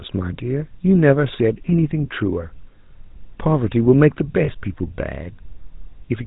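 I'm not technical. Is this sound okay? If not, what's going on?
No. The whole clip has been through the GSM full-rate codec, the old mobile-phone voice coder. It rebuilds speech from a rough model driven by a pulse pattern and throws away everything above 4 kHz, so the voice sounds muffled, buzzy and gravelly from start to finish.

There's also a short burst of lost GSM frames from about 4.44 to 4.49 s, around 40 ms long. When the data went missing, the decoder stretched the last good sound over the gap, so you hear a brief rough, metallic ring there.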